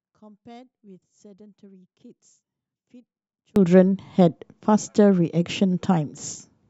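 From the start to 3.56 s, the speech nearly vanishes when the two sides are summed to mono. The level drops by about 33 dB. The likely cause is one channel inverted. One stereo side has reversed polarity. The shared centre cancels, leaving only a faint residue.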